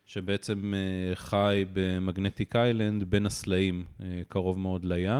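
No technical faults are audible.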